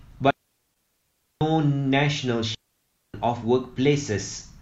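At 0.31 s a digital wireless dropout mutes the speech for about 1.1 s until 1.41 s, leaving clean near-silence with no noise burst. Within that hole, at 0.70 to 0.75 s, a 43 ms gap consistent with one lost AAC frame (AAC frame loss with muting) would give a soft-edged dip from zeroed spectrum. A second dropout mutes 2.55 to 3.14 s.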